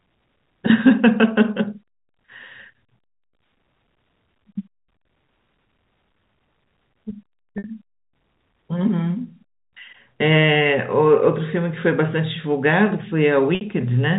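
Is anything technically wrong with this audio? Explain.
Yes, two brief dropouts of about 60 ms each, at 7.58 to 7.64 s and 13.55 to 13.61 s, are packet loss with pitch repetition: the receiver loops the last pitch period, producing a buzzy held tone that fades, seen as repeating identical waveform cycles and evenly spaced harmonic bands.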